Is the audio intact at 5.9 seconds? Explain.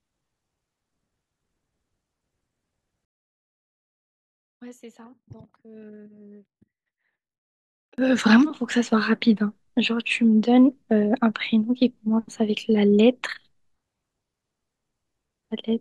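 No. From 3.05 to 7.98 s the speech drops by about 31 dB and turns faint, likely from one channel inverted. With one stereo channel's polarity reversed, the centred voice cancels when summed to mono, leaving only a faint difference signal.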